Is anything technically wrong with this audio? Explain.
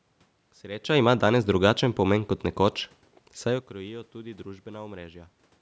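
No, nothing technically wrong stood out on listening to this speech clip.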